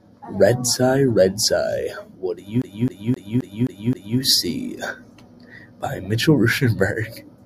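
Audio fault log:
2.62 to 4.19 s: CD stuck on one turn. A slice of sound about 263 ms long plays six times in a row, with a brief mute at each jump. A scratch knocks the laser back one track every rotation, giving an even, rapid stutter.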